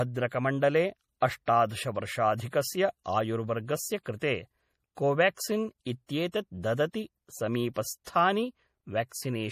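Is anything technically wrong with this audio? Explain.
Yes. The whole recording sounds watery and swirly with nothing above 15.2 kHz. That is likely MP3 compression, at a rate that fits about 40 kbps, starving bits, cutting treble and toggling weak frequency lines frame to frame. At 8.04 s a short hiss runs about 23 ms ahead of an attack, softening it: pre-echo, where block-wide quantisation noise fills the quiet moment before a late transient.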